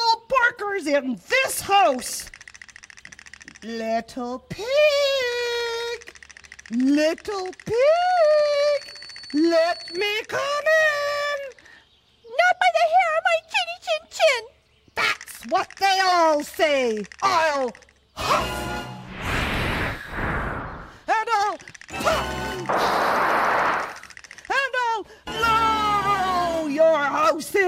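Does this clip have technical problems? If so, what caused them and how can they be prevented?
Yes. A feedback whistle near 4.4 kHz runs from 7.8 to 10.18 s, swelling and fading slowly and sitting well below the main sound. The likely cause is loudspeaker output leaking back into the microphone, hovering just short of runaway. Lowering monitor gain, moving the microphone away from speakers, or notching 4.4 kHz prevents it.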